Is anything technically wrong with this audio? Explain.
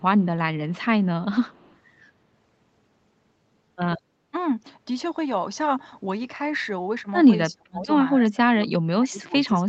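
Yes, there are two kinds of call-processing trouble here.

From 1.46 to 1.77 s there's an echo leak: a faint delayed copy of the speech trailing it by about a quarter of a second (248 ms), sitting around 35 dB under the main voice. The far end was likely on a loudspeaker, and its echo canceller didn't fully scrub what its mic picked up, so a ghost of the talker came back down the line.

Then there's speech suppressed in double talk, first from 7.5 to 7.85 s and again from 8.13 s to the end. The talker's level drops by up to around 30 dB, in the first stretch for about a third of a second in total, so the speech dips. That's likely the echo canceller getting confused while both sides spoke at once and ducking the real talker along with the echo it was trying to kill. Throughout, the audio tops out at 8 kHz, which fits a wideband Opus call.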